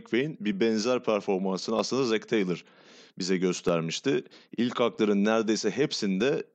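Clock drift buffer slips run from 0.53 s to 6.21 s, giving about ten regular clicks in the speech, one every 0.632 s. Two devices likely ran on independent clocks about 500 parts per million apart, so a buffer between them repeatedly overflowed or ran dry, and around fifteen samples were dropped or repeated at each slip.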